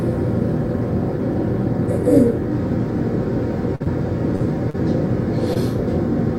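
At 3.75 to 3.82 s comes a burst of packet loss. About 40 ms of audio never arrived. The receiver extended the last sound for about 46 ms while fading it down. The sound sags into a brief held tone or hiss, then jumps ahead.

Short concealed packet loss follows at 3.84 to 3.88 s, 4.36 to 4.42 s, 4.70 to 4.76 s and 5.54 to 5.57 s. Each time, 20 to 40 ms went missing. The receiver patched each hole with a continuation of the preceding sound. Each one is a quick smear or wobble.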